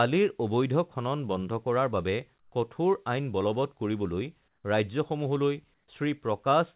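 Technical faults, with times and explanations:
2.40–2.52 s, 4.48–4.64 s, 5.74–5.88 s, comfort noise in place of the background: brief pauses turn flat and featureless, about 2–4 dB quieter, likely discontinuous transmission with synthetic fill over this band-limited, 4 kHz-topped call audio.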